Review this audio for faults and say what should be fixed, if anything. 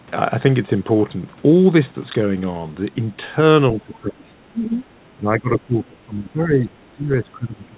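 The speech gets pushed down twice, first from 3.74 to 4.84 s with a dip of around 15 dB, then from 5.17 s right to the end, sinking by about 20 dB. That's most likely speech suppressed in double talk. With both ends talking at once, the echo canceller couldn't separate this talker from the loudspeaker echo and turned everything down. The narrow band with nothing above 4 kHz fits a G.711 mu-law call path and isn't the problem. Better echo-canceller double-talk detection, or a headset on this talker's end, would prevent it.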